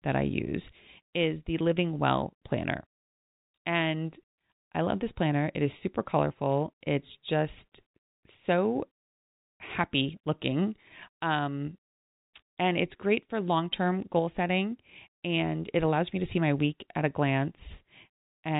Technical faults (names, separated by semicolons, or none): none